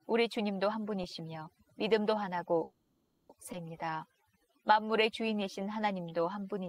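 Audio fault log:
Throughout: overdone noise removal. The background drops and breaks up into twinkling specks. An over-aggressive noise reducer is pulling individual frequency bands down whenever they resemble its noise estimate, taking quieter parts of the voice with them.
2.63–3.30 s: call audio freeze. The sound stalls and the last moment is drawn out as it fades for about 660 ms before speech resumes exactly where it stopped, with nothing lost. Delayed packets likely emptied the jitter buffer, so the receiver filled the wait.
3.52–3.54 s: skip ahead. Playback jumps forward with only a tiny join, and roughly half a second of speech is gone. Later audio was already waiting, so a stretch was discarded and the two sides were spliced almost directly together, removing most of the delay the freeze had added.
3.85–6.65 s: jitter buffer slow-down. Speech runs at about 90% speed with unchanged pitch, its sounds drawn out, stretching this passage by 282 ms. 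The receiver repeated single pitch periods and slices of pauses over and over to rebuild its buffer reserve.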